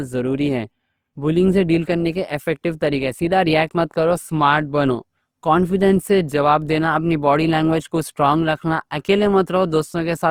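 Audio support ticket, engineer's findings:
Whole clip: speech grainy, rough and noisy-textured, coding damage plainly audible, little swirl, full bandwidth to about 20.2 kHz. Likely Opus compression in CELT mode, bit-starved bands refilled by folding lower bands or with noise, which fits about 24 kbps.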